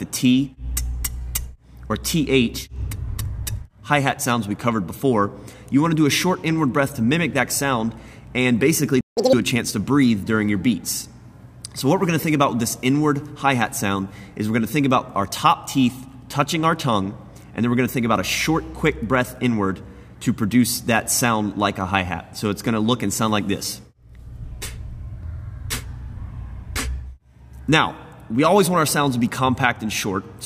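A playback stall at 9.01 to 9.17 s cuts the sound to silence for about 0.16 s, likely because the player's buffer ran dry or its thread was blocked. A catch-up at higher speed follows from 9.17 to 9.33 s: the backlog is resampled at double speed, lifting pitch by about ten semitones.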